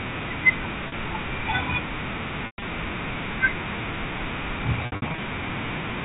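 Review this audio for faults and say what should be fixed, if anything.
Brief buzzy, held tones at 0.88–0.92 s and 4.86–5.18 s, and a held tone fading into silence at 2.46–2.62 s, come from packet loss with pitch repetition, where the receiver looped the last pitch period across missing audio. Prevent this by adding forward error correction or packet redundancy and fixing congestion on the network path.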